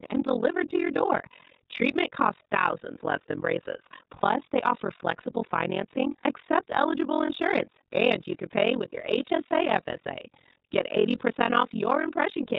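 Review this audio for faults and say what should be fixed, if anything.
iLBC codec, throughout: the speech sounds band-limited to below 4 kHz, with a rough, slightly synthetic edge. That fits the 30 ms, 13.33 kbps mode, which codes each frame's excitation independently. Prevent it by using a wideband codec such as Opus at an adequate bitrate.

Overlap-add ripple, throughout: the level dips about 60 dB once per frame, at around 40 Hz. The result is a rough, robotic tremolo, because the windowed frames were overlapped in a way that doesn't sum to constant gain. Prevent it by choosing a window and hop size that satisfy constant overlap-add.

Lost iLBC frames at 4.2, 7.26 and 9.48 s: each gap is 30 ms, about one frame. The decoder fills it by repeating the last pitch cycle with noise, heard as a brief buzzy held vowel before recovering almost immediately. Prevent it with a jitter buffer and forward error correction or redundancy on the transport.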